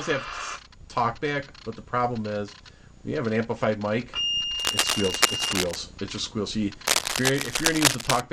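Cable scratch noise appears from 4.59 to 5.77 s and again from 6.86 to 8.20 s: dense, uneven crackling and rustling bursts roughly as loud as the sound itself, likely from a worn cable or connector being moved so its contact resistance fluctuates rapidly.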